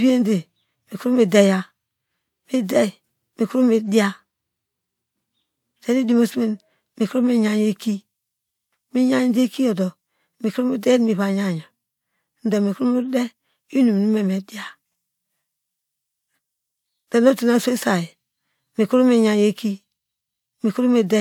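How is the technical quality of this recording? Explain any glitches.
Nothing in the recording stood out as a technical problem on listening.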